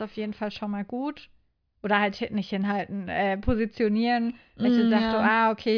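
Nothing goes wrong anywhere in this clip; there's no glitch, dropout or other technical fault to point to at any moment.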